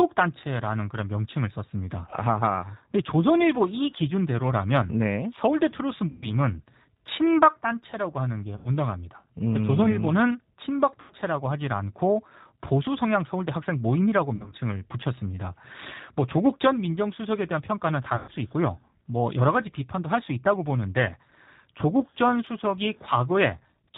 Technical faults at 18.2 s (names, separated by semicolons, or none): G.729 codec; VoIP packet loss concealed by the speech codec